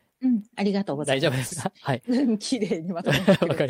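It's a short speech clip with one short concealed packet loss at 1.47 to 1.53 s. Around 40 ms of audio arrived too late to decode, and the receiver patched it by extending the preceding sound before easing back into real audio, so you hear a brief smear right there.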